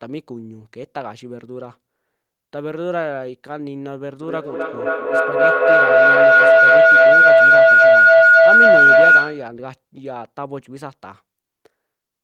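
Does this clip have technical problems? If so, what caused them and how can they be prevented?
Yes: a feedback howl runs from 4.22 to 9.57 s. Sound from a nearby loudspeaker re-entered the microphone with gain above unity, so each pass grew, narrowing to a tone around 1.5 kHz, pulsing roughly every third of a second and peaking about 15 dB above the speech. Prevent it by muting or headphoning all but one device in a shared room.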